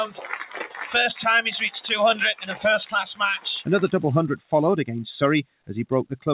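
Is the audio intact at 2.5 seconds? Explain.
No. At 2.5 s the audio sits inside a stretch, from 2.35 to 2.55 s, where sound is cut by the noise suppressor. For about 200 ms the suppressor judged the material to be noise and pulled it down harder than the surrounding signal, with the deepest drop reaching about 15 dB. Held or decaying content there sinks in level and its tail is clipped short, while any sharp onsets pass more intact.

That dip rides on a broader problem: a noise suppressor applied to music or sounds, active across the whole clip. The processor is tuned for speech and treats sustained tones, ambience and reverberant tails as noise, so its gain keeps moving with the material, swinging by around 10 dB. Around 2.5 s this shows as pumping and fluttering level, with sustained parts thinning out and decays cut short rather than ringing naturally. The band-limited character, with nothing above 4 kHz, comes from the G.711 A-law call codec path and is separate from the suppressor.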